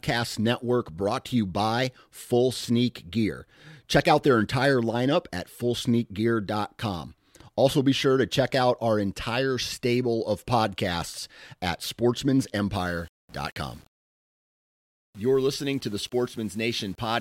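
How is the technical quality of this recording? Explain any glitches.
The recording has one glitch. From 12.74 s to the end at 17.20 s, the speech turns grainy. This is likely low bit depth without dither, consistent with 8-bit rounding. The error follows the speech, so quiet stretches crackle or drop out. The grit sits roughly 35 dB below the speech.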